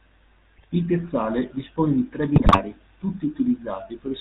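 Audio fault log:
Throughout: GSM full-rate codec, a buzzy, gravelly roughness with nothing above 4 kHz, from pulse-driven vocal-tract modelling at 13 kbps, steady rather than bursting.
0.56–0.66 s and 2.36–2.61 s: GSM bit errors, brief squawks, pops and gargling where corrupted filter, pitch or gain values distort frames, the second burst longer and with a higher error rate.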